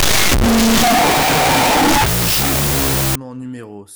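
Speech clip with a wrong sample width fault from 0.0 s to 3.15 s. Audio written as 16-bit integers is read as unsigned 8-bit bytes. Each byte becomes its own sample, so loud noise buries the speech. It plays at half speed and lower pitch.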